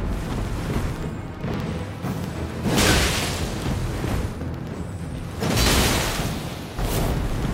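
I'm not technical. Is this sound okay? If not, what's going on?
No. These are periodic USB or driver dropouts: every 0.064 seconds something briefly stalls the audio connection, and a tiny sliver of sound goes silent. From 0.07 to 7.43 s this produces about a hundred evenly spaced ticks, roughly fifteen per second.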